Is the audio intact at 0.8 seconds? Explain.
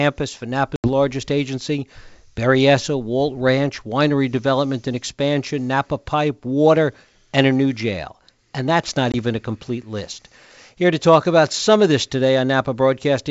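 No. Packet loss on an ADPCM call hits 0.76 to 0.89 s: about 80 ms of several packets drops to hard-edged silence, and the G.722 decoder's predictor and step size lose sync, so speech returns with brief, slight distortion.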